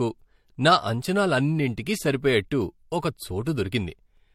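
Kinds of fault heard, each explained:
Transcoding between lossy codecs: the speech sounds like it likely passed through HE-AAC at 40 kbit/s and then MP3 at 64 kbit/s. The MP3 stage spends bits re-encoding the earlier artefacts and adds its own, and nothing remains above about 16.6 kHz.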